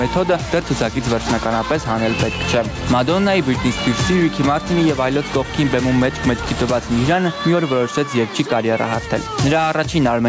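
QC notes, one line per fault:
throughout, gain pumping: the gain ducks under each loud sound by around 10 dB, likely from excessive gain with a fast limiter. The waveform shows flattened peaks, and the spectrogram's energy pulses below the call path's 8 kHz ceiling.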